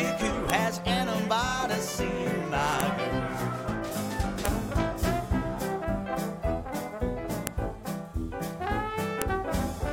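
Separate WAV pieces were joined without stripping their headers, so each header's bytes play back as samples: a file header played as audio, heard as a sharp, loud click at 0.50, 2.80, 4.45, 7.47 and 9.22 s, marking where each new piece begins.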